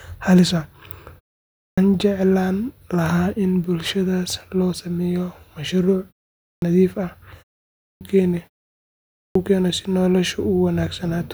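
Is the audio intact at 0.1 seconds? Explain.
Yes, the speech is intact at 0.1 seconds, with no fault at that moment.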